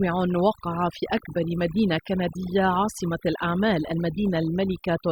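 From start to finish the background drops, broken by small twinkling specks, and the quieter parts of the speech seem to dissolve. This is overdone noise removal: a noise reducer set far too aggressively keeps pulling individual frequency bands down or out whenever they sit close to its noise estimate, so stray fragments flicker in the gaps while low-level detail in the speech gets stripped away along with the noise.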